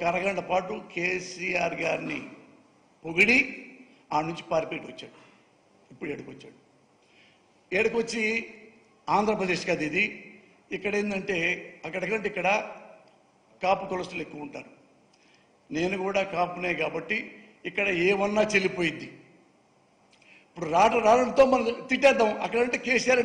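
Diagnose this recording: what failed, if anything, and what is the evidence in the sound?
No faults detected.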